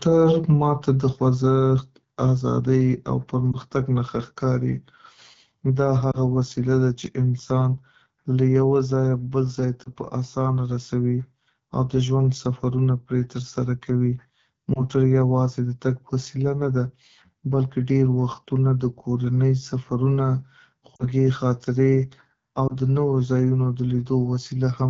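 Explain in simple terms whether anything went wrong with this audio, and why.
The call was carried by the AMR wideband (HD Voice) codec at one of its lowest settings, so the speech sounds rough and raspy throughout.

There were also lost AMR speech frames: radio errors spoiled brief chunks of speech, and the decoder patched each gap by repeating the last good sound more quietly. Listeners hear short dips or warbles at 3.52, 6.11, 9.84, 14.73, 20.96 (slightly longer) and 22.68 seconds.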